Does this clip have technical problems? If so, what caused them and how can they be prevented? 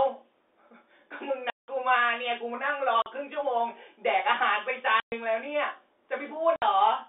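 Yes. Packet loss filled with silence: hard-edged dropouts at 1.50–1.68 s, 3.02–3.06 s, 5.00–5.12 s and 6.56–6.62 s. They last 180, 40, 120 and 60 ms, all multiples of 20 ms, which fits lost 20 ms packets replaced by digital silence on this G.711 telephone-band line (about 300 Hz to 3.6 kHz). Prevent it with a jitter buffer, forward error correction and packet-loss concealment at the receiver.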